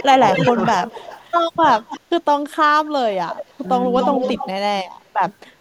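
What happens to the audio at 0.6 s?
Echo leak runs from 0.32 to 0.62 s: a delayed copy of the speech, 236 ms late and about 5 dB below it, likely from an echo canceller leaving loudspeaker pickup unremoved. Speech suppressed in double talk from 0.10 to 0.58 s dips the speech by up to roughly 15 dB, likely from a canceller ducking both talkers at once.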